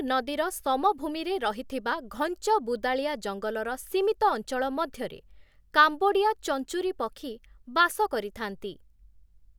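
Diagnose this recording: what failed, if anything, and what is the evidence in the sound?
Listening through the speech recording, nothing stood out as a failure at any stage of the chain.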